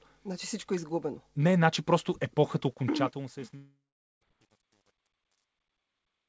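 From 2.64 s the fade-out that begins around 2.6 s shows truncation distortion. The gain stage drops low bits without dither, which points to roughly 10-bit resolution. From 3.31 s the tail turns gritty and stepped. At 3.56 s to 4.23 s the sound smears into a fading buzz, then about 0.45 s of silence, likely a long network dropout with the receiver concealing lost audio.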